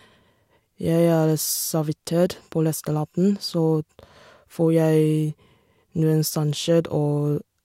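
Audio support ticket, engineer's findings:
Listened through the speech recording and nothing stood out as a fault.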